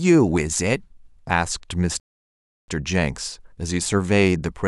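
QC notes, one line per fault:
2.00–2.68 s rebuffering stall: playback ran dry and paused, adding 0.68 s of flat silence; the waveform and spectrogram show a clean empty gap, then the speech resumes exactly where it stopped.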